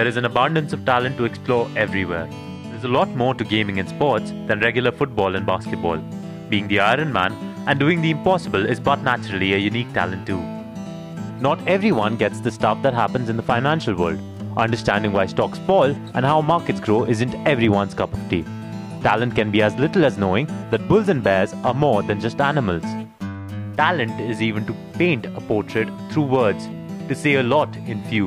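No technical faults are audible.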